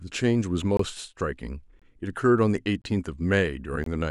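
The speech audio was delivered in one-second chunks, and each join leaves a gap between chunks of silence about 23 ms long, inserted rather than replacing any sound. Each gap starts at 0.77, 1.79, 2.82 and 3.84 s, so the holes recur almost exactly once a second. Nothing is missing, but the speech stops dead and restarts at each join, giving brief hard-edged dropouts in a steady rhythm.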